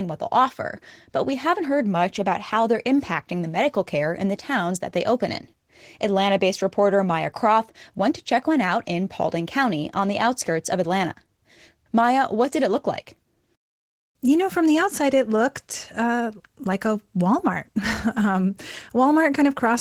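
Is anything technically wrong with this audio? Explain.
Yes. For the whole clip the speech sounds grainy and hoarse, with a slightly robotic edge. That is Opus voice compression at a low rate, consistent with about 16 kbps in hybrid mode. The lower band is coded by linear prediction with a coarsely quantised excitation, which roughens the voice, while a thinly coded upper layer keeps the band full, all in 20 ms frames.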